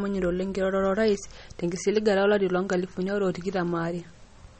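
MP3 compression is heard throughout this speech clip: treble stops sharply near 8.4 kHz, with watery, swirling artefacts, likely from a low bitrate around 32 kbps starving weak frequency lines.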